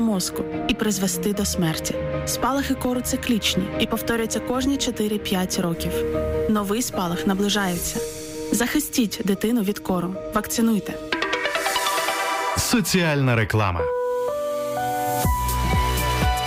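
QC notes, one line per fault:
5.73–8.57 s, low bit depth without dither: the sound turns grainy, with distortion tracking its level and quiet parts breaking up. This is likely truncation to about 7 bits with no dither, so the rounding error follows the signal, sitting roughly 30 dB below it.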